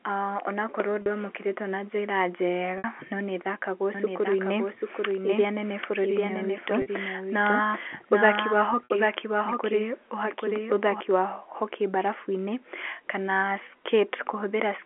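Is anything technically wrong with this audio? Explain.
Yes, two faults are audible in this telephone-band speech.

Packet loss with pitch repetition occurs four times: at 1.02 s (40 ms), 2.78 s (60 ms), 6.82 s (40 ms) and 8.85 s (60 ms). When packets go missing, the receiver fills the gap by looping the last pitch period and fading it down. These dropouts fit two or three 20 ms packets. Each one sounds like a brief held, buzzy tone before the speech resumes through a short cross-fade.

A doubled audio track runs from 3.95 s to 11.0 s, starting just before "ya hockey". A full-band second copy of the speech trails the original by roughly 0.7 s at about 5 dB lower. It has no reverberant tail or room colouring, and it appears and vanishes abruptly. The likely cause is a second, slower capture path being mixed back in. Under the G.711 telephone band, the echo sounds like a dry, overlapping repeat of each phrase.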